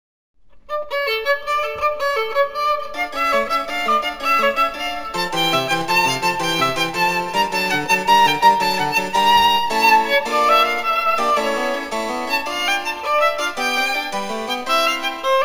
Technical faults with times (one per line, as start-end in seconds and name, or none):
0.00-15.45 imaging from linear upsampling